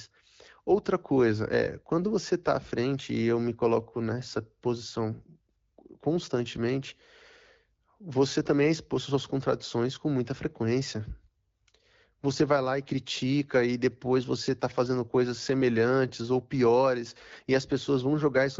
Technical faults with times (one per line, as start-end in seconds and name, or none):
none